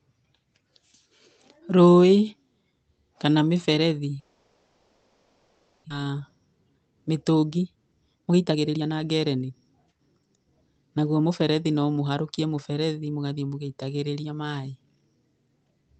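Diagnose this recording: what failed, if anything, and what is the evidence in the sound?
From 4.19 to 5.92 s the speech dissolves into a smeared, fading buzz that never goes fully silent, and it resumes with about a second of material missing. This is likely a long network dropout, with the receiver's concealment filling the 1.7 s gap.

Right after, the speech sounds hurried at unchanged pitch: 6.00–6.21 s and 6.79–9.50 s run at 119% speed, and 9.91–10.45 s at 110%. This is jitter buffer speed-up. Having built up roughly 0.7 s of extra delay, the buffer trims pitch-period slices, roughly 0.6 s in total, to catch up.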